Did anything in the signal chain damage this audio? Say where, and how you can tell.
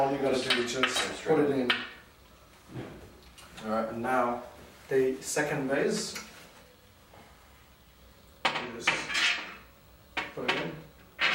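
No, nothing in the signal chain has damaged this audio. I can't point to any stage as the source of a problem, because no damage can be heard anywhere in the clip.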